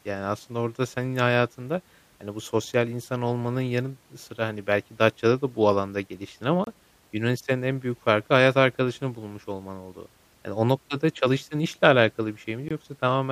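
Just after "da bu alanda geliştin", a gap between stream segments opens at 6.64 to 6.67 s (28 ms) and recurs at 12.69 to 12.71 s (21 ms), spacing that fits six-second segments. Mismatched timestamps leave holes the player fills with silence, heard as hard-edged dropouts with nothing lost. The waveform drops abruptly to a flat line, and the spectrogram shows a narrow, full-height blank stripe.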